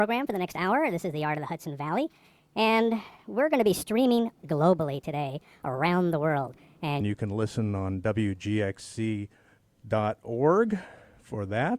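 From 0.00 to 7.01 s comes a section at the wrong speed: the audio runs at 1.43 times normal speed, pitch sits roughly seven semitones high, and everything sounds hurried, likely from a mismatched playback clock. A spectrogram shows harmonics raised and events squeezed until 7.01 s.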